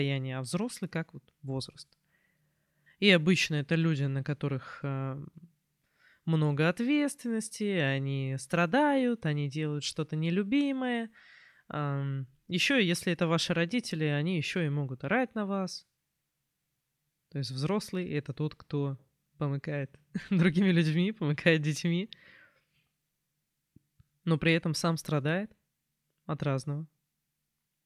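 No technical faults are audible anywhere in the speech recording.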